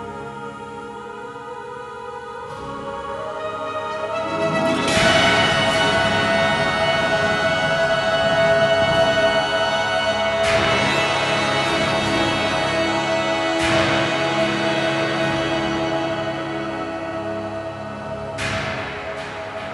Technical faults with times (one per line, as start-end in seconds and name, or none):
none